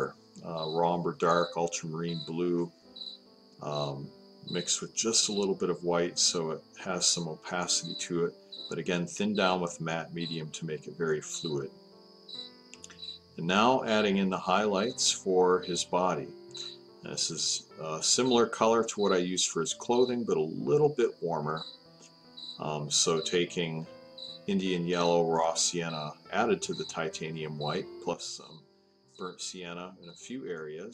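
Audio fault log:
28.13 s to the end, sudden gain jump: everything, background noise included, drops by about 12 dB in one step and stays down. No fade at all, so it's likely a digital gain setting applied instantly rather than ramped in.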